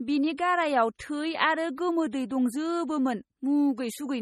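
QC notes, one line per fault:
Throughout, MP3 compression. The speech has a watery, swirly quality, and nothing is present above 13.8 kHz. The likely cause is an MP3 encoder short of bits. At a rate that fits about 32 kbps, it keeps dropping weak frequency lines, and those lines flicker on and off between frames. The encoder also removes the treble above a fixed cut-off. The damage is heavy, so the burbling texture sits on every part of the speech.
0.37 s and 0.98 to 1.00 s, pre-echo. Before each of these two sharp attacks, a brief hiss leads in, spreading about 18 ms and 21 ms respectively. Each onset sounds soft and smeared rather than crisp. The encoder spreads its quantisation noise across a whole block. When an attack falls late in that block, noise sized for the loud part also fills the quiet moment before it, so the hiss arrives early.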